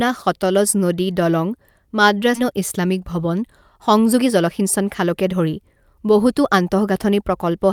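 At 2.35 to 2.37 s the speech jumps abruptly into "ইছলামিক ভৱন". This skip ahead dropped roughly a second and a half of queued audio with no fill. From 4.19 to 6.92 s the speech sounds hurried but keeps its pitch. This is a jitter buffer speed-up, running at 108% and trimming around 200 ms of surplus buffered audio.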